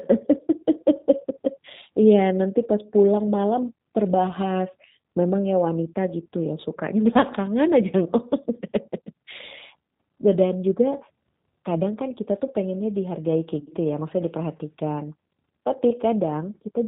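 G.729 codec damage runs through the whole speech clip. The band stops at 4 kHz, and the texture has the roughness of a low-rate coder that fits 8 kbit/s G.729A. Instead of carrying the waveform, the coder rebuilds each 10 ms frame from a vocal tract filter, a pitch predictor and a few pulses. That leaves the speech intelligible but slightly grainy and synthetic, with the damage plainly audible.

VoIP packet loss concealed by the speech codec occurs from 13.60 to 13.71 s. Roughly 80 ms of audio went missing, scattered across 100 ms, with the longest unbroken gap about 40 ms. The decoder filled the holes by extending its last pitch and filter settings while lowering the gain frame by frame. The result is a brief stretched smear that dips in level. Because each frame is predicted from the previous one, the sound stays weak or distorted for a short while after the packets resume.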